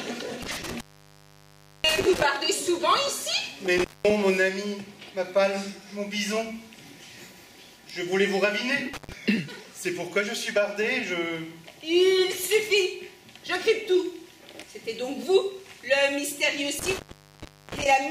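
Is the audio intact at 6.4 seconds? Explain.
Yes, the audio at 6.4 seconds is intact, with no dropout, click, distortion or other fault at that moment.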